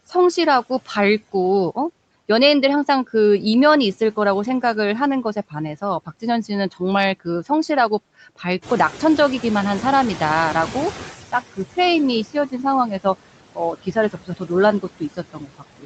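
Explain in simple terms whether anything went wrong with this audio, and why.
The background noise keeps dipping between phrases and swelling back under the speech throughout. These are noise suppressor artifacts: the filter turns down whatever frequencies it judges to be steady noise, moment by moment, leaving that uneven residue.

Around 8.5 s the room noise suddenly gets louder, and from 8.62 to 11.15 s it comes through stronger before settling back down. This is the noise suppressor catching up: its picture of the background was out of date, and it needed about two and a half seconds to adjust.

Parts of the speech sound swallowed or faint, briefly from 12.25 to 12.64 s, then more heavily from 13.52 to 14.51 s and from 14.82 s to the end. This is speech cut by the noise suppressor: it mistook quieter parts of the speech for background noise and turned them down along with it.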